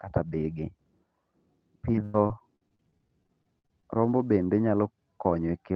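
From 1.92 to 3.84 s, just before "rombo bende", the speech breaks up with repeated packet loss, heard as a robotic sound. Around twenty short holes follow one another. The longest runs to 107 ms, and together they cover about a quarter of that stretch. Each hole is filled by repeating the last bit of sound, so the voice turns choppy. A single dropout would leave one isolated glitch. Here the patches keep coming. This happens within the Opus call path's 8 kHz band.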